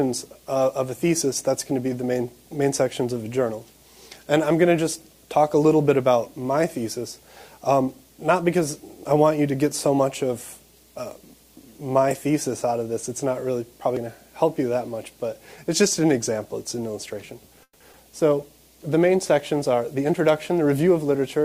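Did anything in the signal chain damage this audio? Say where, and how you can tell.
Yes. Call audio freeze, 17.63 to 17.82 s, network and jitter buffer stage. The sound stalls and the last fragment is stretched into a fading buzz for about 170 ms, with the final 50 ms or so near silent. The audio then resumes exactly where it stopped, so nothing is lost but the timeline is pushed back by those 170 ms. The likely cause is delayed packets draining the jitter buffer, with the receiver concealing the wait.

Skip ahead, 17.92 to 17.95 s, network or jitter buffer stage. Just after the freeze, playback jumps forward with only about 10 ms of filler at the join. Roughly 70 ms of audio never plays, and the two sides are butted almost directly together, which gives an abrupt discontinuity instead of a gap. A stretch of audio was dropped, either on the way or by the jitter buffer when it overflowed, while later audio was already waiting.

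Jitter buffer speed-up, 19.73 to 20.99 s, jitter buffer stage. Over this second and a bit the audio runs at about 107% speed while the pitch stays put, so it sounds slightly hurried. The buffer was still holding more audio than its target. To shrink that backlog it snipped out short pitch-period-length pieces many times in a row, removing around a tenth of a second in total instead of dropping one large chunk.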